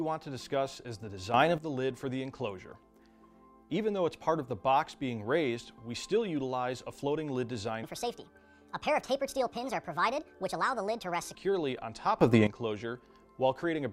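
At 1.34 s a sudden gain jump lifts the level by about 9 dB. It holds until 1.58 s, then drops back. Sound and background noise rise together. The likely cause is a gain setting applied without a ramp.

From 7.84 s to 11.35 s comes a section at the wrong speed. It plays 1.47 times too fast. Pitch rises with it, by about seven semitones. Everything sounds high and hurried. This likely comes from the section following the wrong clock.

At 12.21 s a second sudden gain jump arrives, about 14 dB this time. It lasts until 12.47 s. Sound and noise floor jump together, then fall back. The likely cause is again an abrupt digital gain change.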